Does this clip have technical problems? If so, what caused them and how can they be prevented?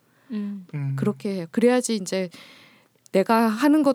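No, nothing stood out as a technical problem on listening, so there is nothing here that needs preventing.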